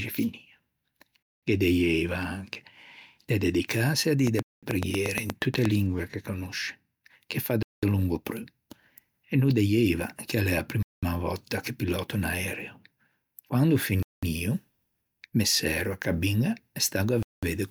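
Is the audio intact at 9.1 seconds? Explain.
Yes, the speech at 9.1 s plays through intact, with no audible dropout, glitch or distortion at that moment.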